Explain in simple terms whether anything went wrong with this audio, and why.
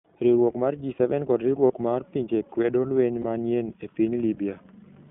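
Yes, two things went wrong. First, the whole recording was squeezed through the iLBC codec, a narrowband phone-call codec that codes short slices of the signal, each on its own. Everything outside roughly 150 Hz to 3.5 kHz is cut away, so the speech sounds thin, muffled and boxy. The coding also leaves a plainly audible rough, slightly synthetic edge on the speech.

Second, there are lost iLBC frames. Pieces of the stream never arrived, and the decoder filled each hole by repeating the last bit of sound it had, mixed with a little noise. The first gap, from 1.66 to 1.72 s, lasts about 40 ms. The second, from 3.22 to 3.25 s, is shorter. Each one sounds like a brief held, buzzy hum, and the speech comes back cleanly right after.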